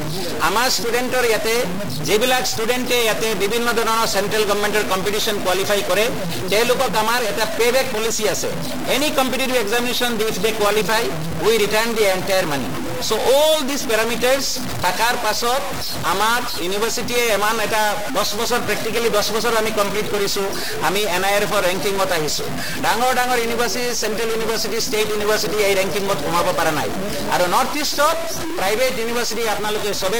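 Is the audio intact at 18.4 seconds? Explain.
No. At 18.4 seconds the audio carries a stuck bit fault, which runs through the whole clip rather than starting or stopping near that point. One data bit, likely held at a fixed value by a broken line or converter, pushes about half of the samples off by a fixed step of roughly -20 dBFS. Because that step follows the waveform, it sounds like harsh, buzzy distortion, and quiet passages fill with a steady, fairly loud noise.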